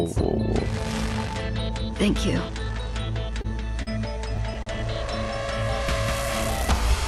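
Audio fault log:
3.41 s, 3.82 s, 4.63 s: short stall from a late packet. The jitter buffer ran dry, so the sound is held 30, 44 and 38 ms with a slight buzz or dip, then resumes without a skip.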